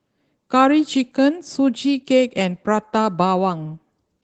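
Speech clip coded with Opus voice compression at a low rate, with coarse excitation throughout. It sounds plainly hoarse and slightly robotic, which fits about 16 kbps hybrid-mode coding.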